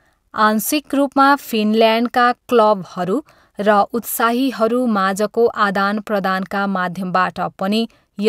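Nothing in this speech recording stood out as a technical problem on listening.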